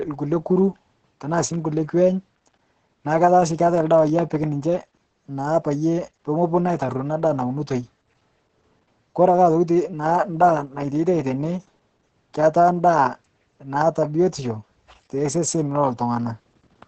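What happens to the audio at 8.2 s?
At 8.2 s the speech sounds muffled, hoarse and slightly robotic, with nothing above 9.1 kHz, as it does throughout the clip. This is heavy Opus voice compression: its SILK coder encodes the excitation coarsely in 20 ms frames, which fits a bitrate near 10 kbps.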